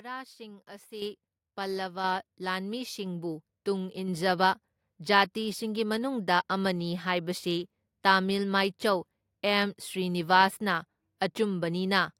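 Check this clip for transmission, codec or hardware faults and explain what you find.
The speech has one hardware-side fault, occurring three times. The microphone volume is stepped up at 1.02 s, 2.04 s and 3.06 s. Each time, the calling software judged the input too quiet and raised the device's input volume in a single jump instead of a gradual ramp. The steps are about 8 dB, then about 4 dB, then about 2 dB. At each point the voice and the background noise become louder together and abruptly, and the jumps get smaller each time.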